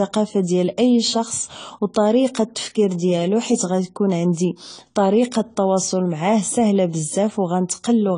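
Speech, and the whole thing is dull, with nothing above 10 kHz and a smeared, warbly fizz on sibilants, likely AAC compression at a low bitrate around 24 kbps.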